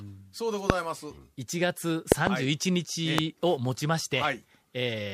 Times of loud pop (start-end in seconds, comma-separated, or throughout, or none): 0.70-0.72, 2.12-2.29, 3.18-3.21